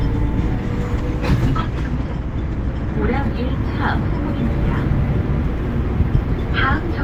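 From 0.96 to 3.07 s the sound turns rough and muffled, consistent with a call bitrate drop from around 48 kbps to 18 kbps, coarsening the coding.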